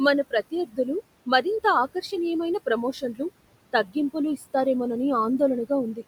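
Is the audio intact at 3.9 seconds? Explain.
No, not quite. From 3.73 to 3.96 s the noise suppressor cut into the speech. It mistook a soft stretch of the speech for steady background and turned it down along with the noise, by up to about 15 dB. Around a tenth of a second in total gets hit, so at 3.9 s the sound comes across swallowed and faint, as if it briefly dropped away.

That sits on top of noise suppressor artifacts that run through the whole clip. The suppressor pulls the steady background down by about 21 dB, judging band by band and frame by frame. The room noise, which is about 17 dB under the speech, sinks in the gaps and creeps back up under the talking.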